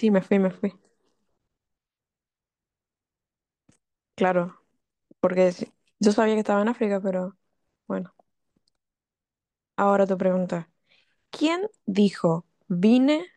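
No technical faults can be heard anywhere in the recording; the signal stays continuous and intact throughout the speech.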